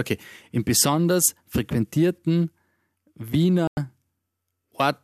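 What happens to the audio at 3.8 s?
A digital broadcast dropout cuts the speech to silence from 3.67 to 3.78 s. The receiver lost valid frames and muted. About 0.1 s is gone.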